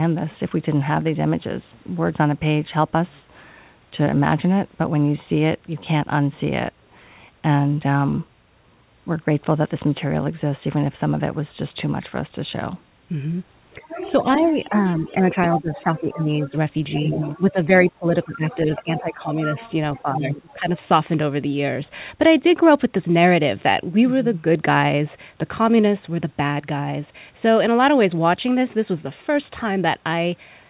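From 13.8 to 20.68 s, speech is suppressed in double talk in three stretches: 13.8 to 16.55 s, 16.99 to 19.58 s and 19.95 to 20.68 s. The voice dips by up to about 25 dB. The likely cause is an echo canceller ducking the talker while both sides speak. The other side's voice leaks through at 13.9, 16.94, 18.23, 19.45 and 20.51 s. It is a second voice, about 10 to 30 dB below the talker. Over the G.711 call path, nothing comes through above 4 kHz.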